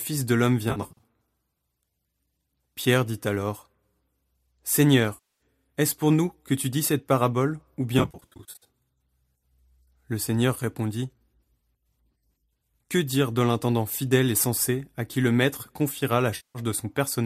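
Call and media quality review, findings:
AAC frame loss with concealment, 0.70–1.03 s, after "de l'homme": about 190 ms lost, scattered over 300 ms, longest run roughly 50 ms. Decoder refills the gaps from the last good spectrum, which gives a smeared, phasey texture. Same symptom at 5.14–5.41 s (260 ms lost), at 7.99–8.67 s after "dis cette parabole ou" (420 ms lost across 660 ms, longest run near 70 ms), and at 16.36–16.59 s after "qui le maître confiera" (190 ms). The gap lengths fit 10 ms frames, likely from low-delay AAC (AAC-ELD) at 64 kbps, whose coding damage is light.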